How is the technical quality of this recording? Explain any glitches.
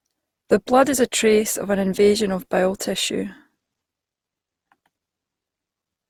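The recording has one fault, present throughout the speech. Generation loss runs the whole length: the sound is likely the result of repeated lossy coding, around seven passes at a rate that fits 64 kbit/s Opus. Each re-encode quantises on a shifted frame grid, so noise piles up, leaving the speech swirly, hollow and smeared, with softened consonant attacks.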